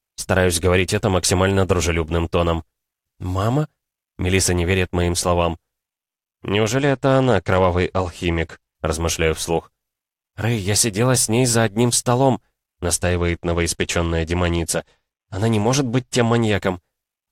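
From 6.79 to 8.75 s and again from 12.92 to 16.54 s, a Bluetooth SBC bit pool drop dulls the treble and adds gritty noise, consistent with bit pool falling from 28 to 13 (about 102 kbps); spectrograms show the upper bands thinning and going blank.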